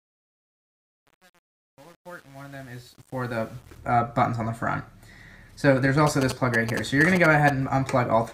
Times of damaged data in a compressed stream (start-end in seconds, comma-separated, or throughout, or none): none